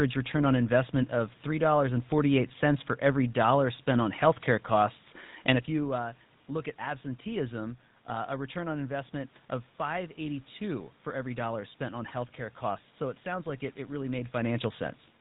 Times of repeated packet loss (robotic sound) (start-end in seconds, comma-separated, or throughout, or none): none